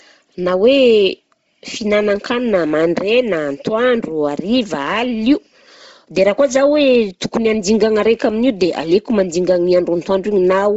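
The speech runs band-limited throughout, with nothing above 7.8 kHz, and its upper range has a breathy, grainy, noise-filled texture from heavy transform-codec damage. The likely cause is Bluetooth LC3 compression at a low rate, consistent with roughly 24 kbps and 7.5 ms frames.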